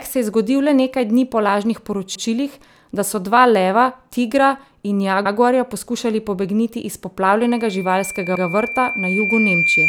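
At 2.15 s, just after "dni po lažnih", and again at 5.25 s after "tigra in", overlapping chunks produce a brief stutter. Each 3-second chunk starts 100 ms before the previous one ends, so that slice plays twice. It is a repeat rather than a gap, which separates it from a dropout. From 7.4 s, after "pobegniti iz", a loudspeaker feedback squeal at 2.4 kHz swells over about two seconds to sit a few dB above the speech. The growth of a single pitch distinguishes it from a steady interference tone. The howl continues to the end, and the third stutter falls within it at 8.35 s.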